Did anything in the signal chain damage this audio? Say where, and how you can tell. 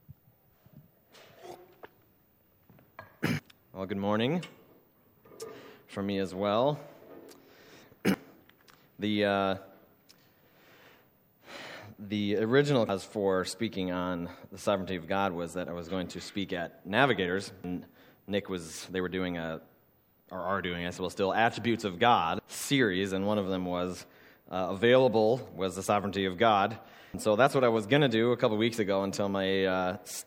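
Yes, audio missing between chunks: abrupt skips at 3.39, 8.14, 12.89, 17.64, 22.39 and 27.14 s, each dropping roughly a third of a second, likely from a recorder writing 5 s chunks.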